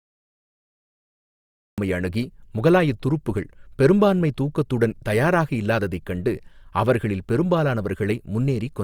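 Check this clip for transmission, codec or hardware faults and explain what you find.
There is one fault, a cut-off start. From 0.0 to 1.78 s the clip is digital silence, then the speech enters abruptly mid-sound at "அணுகி முகலாய துருப்புக்கள் பெரும்பான்மை" with no natural attack. Capture or streaming began late, so the opening of the utterance was never recorded.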